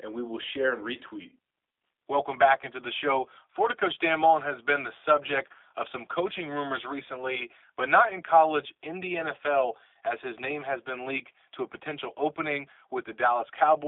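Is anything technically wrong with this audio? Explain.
Yes. Throughout the speech, the audio has passed through a G.729 codec, the sound matching the G.729A variant at a rate that fits 8 kbit/s. Rather than storing the waveform, the codec rebuilds each 10 ms frame from a vocal tract filter, a pitch predictor and a few pulses, inside a line band of roughly 300 Hz to 3.6 kHz. That damage is plainly audible: the speech is thin and band-limited, with a rough, buzzy, synthetic edge.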